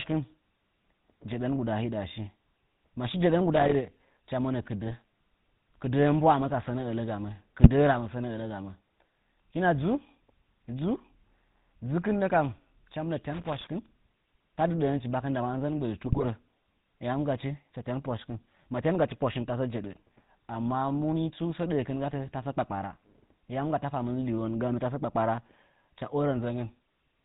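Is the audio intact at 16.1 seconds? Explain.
No. From 16.06 to 16.27 s the sound breaks into squawks, pops and a gargling burst. These are GSM bit errors: corrupted bits reached the decoder and scrambled its filter, pitch and gain values, so each hit frame has a warped spectrum or a sudden jump in level.

Underneath and throughout, the sound has the buzzy, gravelly roughness of the GSM full-rate codec, with nothing above 4 kHz. The codec rebuilds speech from a vocal-tract model driven by sparse, evenly spaced pulses, which fits a 13 kbps stream, and the damage is plainly audible.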